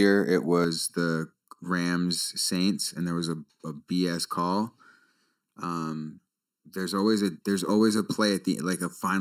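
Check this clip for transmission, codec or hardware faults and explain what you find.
One fault is present. Channel delay (comb filtering) runs from 0.64 s to the end. One channel arrives less than a millisecond late, and summing to mono cancels shared content at evenly spaced frequencies. The notches start near 700 Hz, and the speech sounds hollow and phasey.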